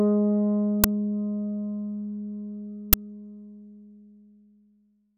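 At 0.84 s and again at 2.93 s a sharp, loud burst of harsh digital noise cuts through the sound. The first lasts about 5.3 ms, the second about 10.7 ms, which fits a 256-sample and then a 512-sample buffer. Both are uninitialised buffer faults: each block went to the output before any audio had been written into it, so whatever data was left in that memory was played as samples.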